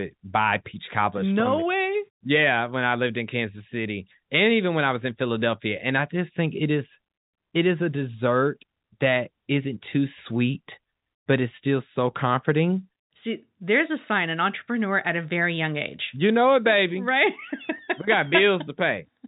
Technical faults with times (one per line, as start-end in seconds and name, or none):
none